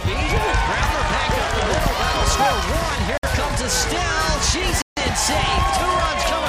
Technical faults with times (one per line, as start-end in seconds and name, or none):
3.18-3.23 Bluetooth stall
4.82-4.97 Bluetooth stall